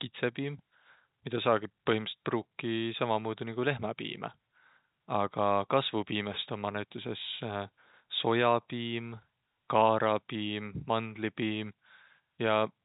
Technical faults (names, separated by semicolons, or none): none